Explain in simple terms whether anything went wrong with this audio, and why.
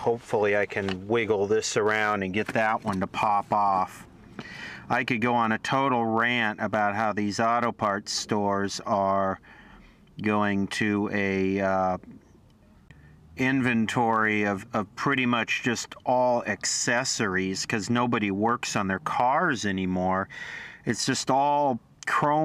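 Nothing went wrong with this audio. No glitches, dropouts or distortions turn up anywhere in it.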